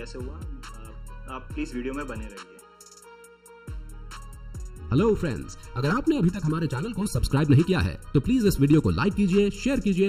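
Channel delay (comb filtering) affects the whole audio. One channel lagged under a millisecond before mono summing, leaving hollow, phasey notches from around 700 Hz.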